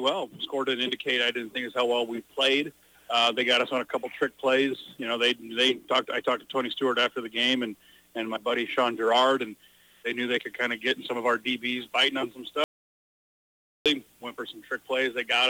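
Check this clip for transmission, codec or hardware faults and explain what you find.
There is one fault, an audio dropout to silence from 12.64 to 13.86 s: about 1.22 s of sound vanishes into silence, likely from lost input, showing as a flat waveform and blank spectrogram.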